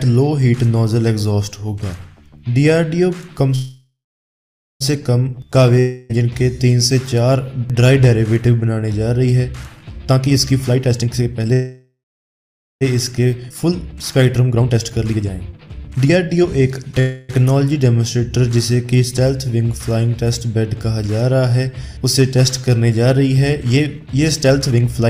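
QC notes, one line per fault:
3.55–4.82 s, 11.53–12.83 s and 17.00–17.31 s: call audio freeze. The last sound is carried on as a fading buzz, then silence for about 0.85 s in the first two. The third is 0.29 s, with no silence. The audio then resumes where it stopped, so nothing is lost. A gap of 1.25 s, 1.28 s and 0.29 s is added. Packets were likely held up, and the jitter buffer ran empty.
5.79–6.11 s: long network dropout. The last sound is stretched as a fading buzz for about 0.3 s, with no full silence. When the audio returns, about 0.3 s of it is missing and never heard. No packets arrived for that stretch, likely from a network loss. The receiver filled the hole, then skipped ahead past the lost part.
9.98–11.52 s, 12.93–16.99 s and 23.65–25.09 s: jitter buffer speed-up. The audio plays faster at unchanged pitch: 136%, 126% and 139% speed. It sounds rushed. Roughly half a second is cut in the first and last runs, about a second in the middle one. 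The buffer held more audio than it aims for, so the receiver removed many short pitch-period slices to bring the delay down. Each of the first two runs leads straight into a freeze.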